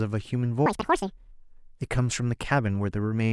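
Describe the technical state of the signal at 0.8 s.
At 0.8 s the speech is read two samples at a time (double speed), from 0.66 to 1.33 s. It plays 2.0 times fast and an octave up, with compressed waveform cycles and spectrogram harmonics stretched upward.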